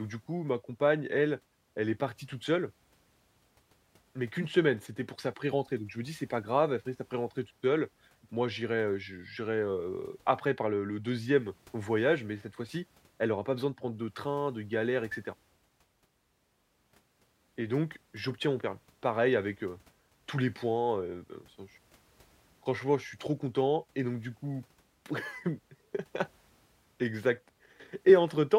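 No technical faults can be heard in this recording.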